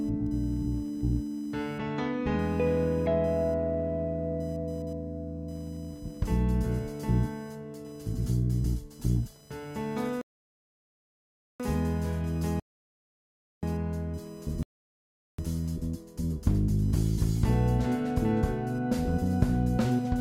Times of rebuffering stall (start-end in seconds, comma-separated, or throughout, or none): 10.21-11.60, 12.60-13.63, 14.63-15.38